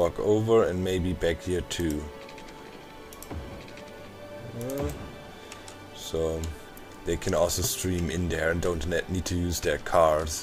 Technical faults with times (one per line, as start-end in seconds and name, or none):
none